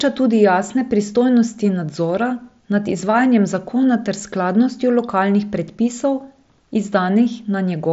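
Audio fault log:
No faults heard.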